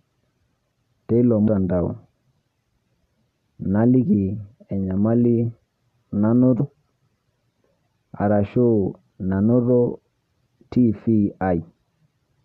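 A speech recording with compressed frames skipped at 1.47 s and 6.6 s. At each point the speech jumps forward by roughly a tenth of a second, which fits several missing 23.2 ms frames. The decoder either never received them or discarded them as damaged. Unlike a network dropout, there is no silent gap. The words simply lurch ahead.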